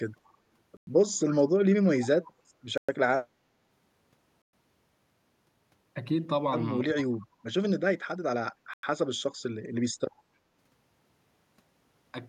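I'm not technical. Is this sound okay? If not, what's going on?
No. The speech has three kinds of glitch. First, Bluetooth stalls: four brief dropouts to silence, about a tenth of a second each, at 0.77, 2.78, 4.42 and 8.74 s, likely from wireless interference pausing playback. Second, an echo leak: at 2.02 s a faint copy of the voice comes back about 0.3 s late, likely the other end's speakerphone feeding it back. Third, speech suppressed in double talk: at 2.52 s and again from 6.86 to 7.18 s the voice dips sharply, likely because the echo canceller turned it down while both sides were talking.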